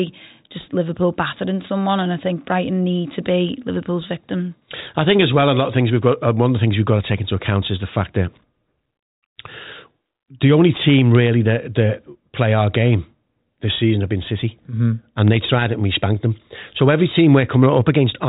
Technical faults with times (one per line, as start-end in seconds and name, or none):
none